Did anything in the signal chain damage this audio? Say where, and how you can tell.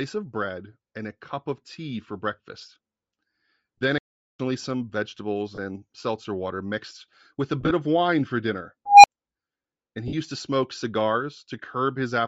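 Yes. The whole clip has a breathy, grainy top end where upper frequencies sound noise-filled rather than detailed. That points to the codec stage, likely Bluetooth LC3 compression at a low rate that fits about 32 kbps with 10 ms frames. Unlike plain low-pass band-limiting, the highs are still present but rough.

Lost LE Audio frames cause brief noisy smears where the sound turns to hiss-like texture instead of dropping out. This happens at 3.78 to 3.82 s (about 60 ms of loss scattered over 80 ms), at 5.55 s between "some vegetables" and "seltzer water mixed with", at 7.61 to 7.71 s after "water mixed with a", and at 10.08 to 10.14 s. The decoder repeated the last spectrum with scrambled phase.

A playback stall at 3.98 to 4.40 s leaves about 410 ms of clean silence before the audio resumes, which fits the player or driver buffer running dry. It differs from the frame losses because there is no smeared fill or fade, just a dead gap far longer than a concealed dropout.

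An unstable filter appears at 8.86 to 9.07 s, right after "of wine for dinner". A tone near 700 Hz swells over about 180 ms into clipping, then cuts to roughly 30 ms of silence as a processing-stage recursive filter blows up and resets. Acoustic feedback would keep ringing instead of collapsing.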